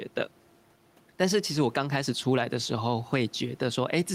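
A speech recording with gain pumping throughout: the room noise, about 35 dB below the speech, swells by roughly 5 dB in every pause and ducks under each loud syllable, likely from excessive input gain driving a fast limiter. Unlike a noise gate, the background never drops out; it just rises and falls.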